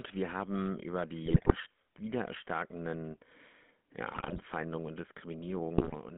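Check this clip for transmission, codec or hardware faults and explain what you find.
The speech has two transmission faults: GSM full-rate coding for the whole clip, and three bursts of GSM bit errors.

The GSM full-rate codec is present from start to finish, with plainly audible damage. The codec rebuilds the voice from a vocal-tract filter driven by a sparse, regularly spaced pulse excitation, which fits the 13 kbps full-rate scheme. That coarse excitation gives the voice a buzzy, gravelly roughness. On a spectrogram the energy sits in a band from about 200 Hz to 3.5 kHz, with nothing above that ceiling, and the harmonics look smeared and grainy.

GSM bit errors break in at 1.26 to 1.57 s, right after "wir haben über", then at 4.12 to 4.47 s and at 5.78 to 5.97 s. Corrupted bits reach the decoder, which fits an error rate of a few percent. The decoder then applies wrong filter, pitch or gain values frame after frame while each burst lasts, so the voice turns into squawks, pops and gargling. 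On the waveform these stretches show sudden level jumps. On the spectrogram they show blotchy, distorted patches where the formant structure falls apart.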